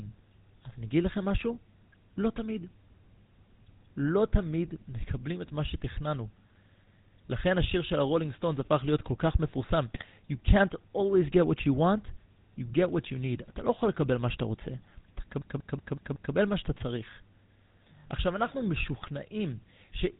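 From the start the speech carries the buzzy, gravelly roughness of the GSM full-rate codec, plainly audible and consistent with a 13 kbps stream. The codec rebuilds the voice from a vocal-tract filter excited by a sparse, regularly spaced pulse train, so fine detail is lost. On a spectrogram nothing appears above 4 kHz, and harmonics look coarse and smeared rather than cleanly striated.

GSM bit errors break through at 9.94 to 10.06 s and again at 19.02 to 19.09 s, the first burst heavier. Corrupted filter, pitch or gain values reach the decoder, so for a few frames the spectral shape warps or the level jumps, heard as squawks and gargling pops. On the waveform these show as short amplitude spikes, and the spectrogram shows brief blocks of distorted, misplaced energy.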